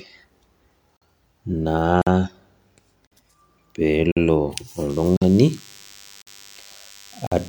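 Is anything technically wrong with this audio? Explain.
Yes, the speech has two faults.

Gap between chunks: 50 ms silent holes at 0.97, 2.02, 3.07, 4.12, 5.17, 6.22 and 7.27 s. The audio was delivered in 1 s chunks with silence left at each join, so the sound stops briefly and resumes without losing any content.

DECT cordless phone buzz: from 4.9 s to the end there is a thin, steady buzz at 100 Hz with many harmonics, roughly 25 dB below the speech. A nearby DECT handset or base sends a radio burst every 10 ms, and the audio circuitry rectifies that burst into audible sound.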